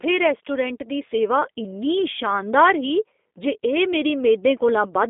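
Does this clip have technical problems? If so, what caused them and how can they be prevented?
Yes: the whole clip went through the G.729 codec, consistent with an 8 kbit/s VoIP link. It rebuilds speech from a filter model and sparse pulses, leaving a plainly rough, synthetic tone and nothing above 3.7 kHz. Prevention: negotiate a wideband codec such as G.722 or Opus wherever bandwidth allows.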